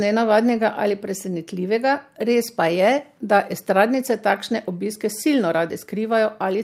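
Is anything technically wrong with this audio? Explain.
No, nothing is technically wrong with this audio.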